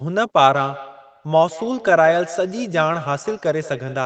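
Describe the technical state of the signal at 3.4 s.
At 3.4 s the speech carries a feedback echo between two devices, present from 0.41 s to the end. A second device replays this audio into the microphone, so each sound returns roughly every fifth of a second, thin and ringing, peaking about 17 dB below the direct speech.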